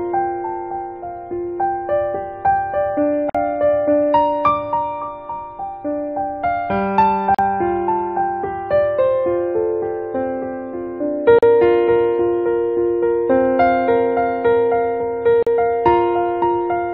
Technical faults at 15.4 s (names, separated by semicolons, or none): gap at a join of encoded pieces